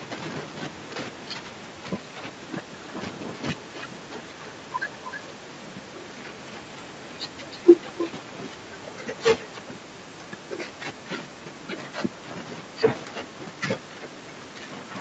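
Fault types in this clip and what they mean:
Echo leak, 2.5–9.85 s and 10.93 s onward: speech returns about 0.31 s late, loud then faint, likely loudspeaker pickup the echo canceller missed.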